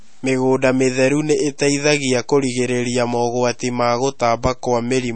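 Speech, with MP3 compression damage running through the whole clip. Nothing is heard above 8.4 kHz, so the top end sounds dull. Quiet detail flickers in and out, giving a watery, swirly texture, and attacks smear. That likely points to a low bitrate around 32 kbps.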